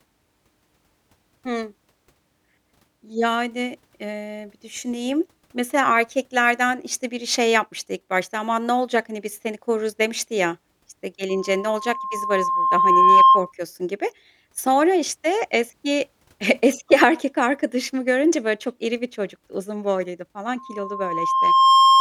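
Speech clip with loudspeaker feedback squeal: a 1.1 kHz tone swells from 11.29 to 13.52 s over about two seconds, then again from 20.58 s to the end, sitting roughly 10 dB above the voice.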